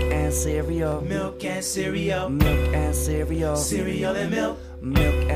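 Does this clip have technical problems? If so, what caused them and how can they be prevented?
Yes, there's a regular tick every 0.81 s from 0.11 to 4.96 s, about seven in all. It's likely clock drift buffer slips: two devices roughly 500 ppm apart, so their buffer periodically drops or repeats a handful of samples. Sync both devices to one shared clock, or put an adaptive resampler between them.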